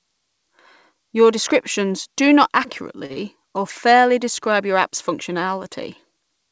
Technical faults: short stall from a late packet; short concealed packet loss

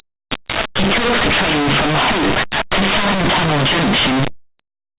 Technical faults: linear audio read as companded

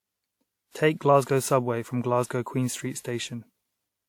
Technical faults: generation loss

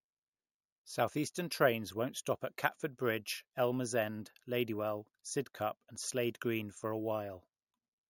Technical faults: imaging from sample-and-hold upsampling

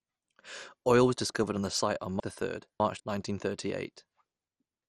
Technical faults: MP2 compression; chunks out of order

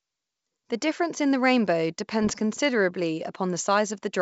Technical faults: bit errors on an ADPCM link

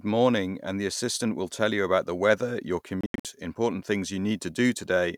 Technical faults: Bluetooth dropout

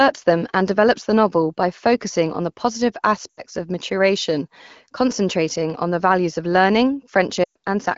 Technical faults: lost AMR speech frames

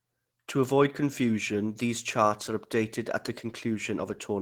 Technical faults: Opus compression

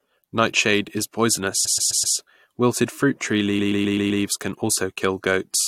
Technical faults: repeated frames

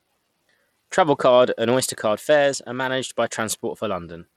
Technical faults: Bluetooth SBC compression

